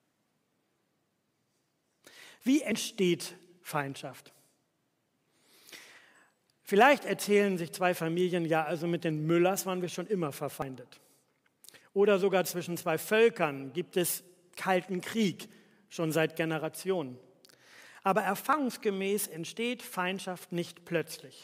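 Audio missing between chunks at 2.72, 6.67, 10.62, 14.57 and 18.53 s: each time the sound jumps ahead by about 50 ms, with the two sides joined directly and no gap. The regular spacing likely comes from 4 s chunks losing a sliver at every changeover.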